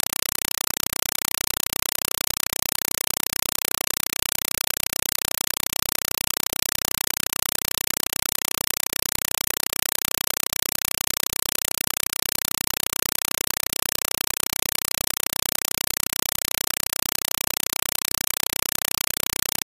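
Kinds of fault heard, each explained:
compressed stream played as audio: AC-3 data reaches the output undecoded. It sounds like chattering static, with 4 ms noise bursts 31.25 times a second and gaps between them, throughout.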